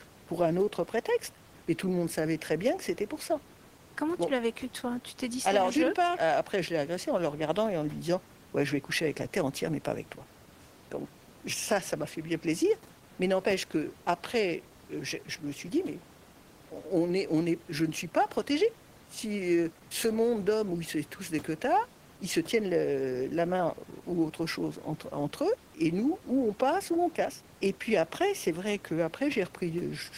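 Nothing in this speech recording stood out on listening, beyond the low background of the room it was recorded in, which sits about 27 dB below the speech.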